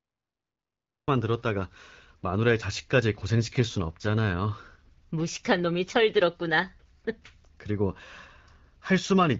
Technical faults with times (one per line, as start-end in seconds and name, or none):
0.00-1.08 cut-off start